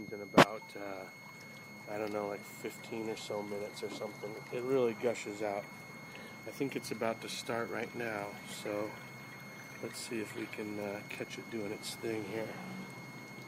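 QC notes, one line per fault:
Throughout: switching supply whistle. A switching power supply is cycling at a rate low enough to be audible, either by running in burst mode or by beating against another supply, and it couples into the audio path. The result is a thin high whistle that wanders between about 2.14 and 2.18 kHz as the supply's operating point shifts. It sits roughly 15 dB below the wanted signal for the whole clip.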